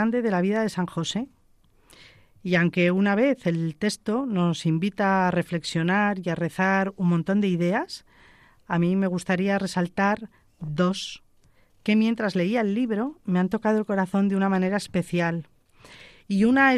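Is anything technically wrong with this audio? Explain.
No, no technical faults present.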